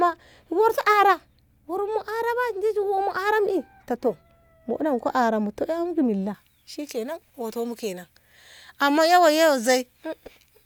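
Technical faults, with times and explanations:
6.34 to 10.66 s, pre-emphasis left on: speech turns thin and sibilant, with a steady shelving treble lift of about 11 dB at 10 kHz fitting an undone J.17 curve rather than a narrow peak.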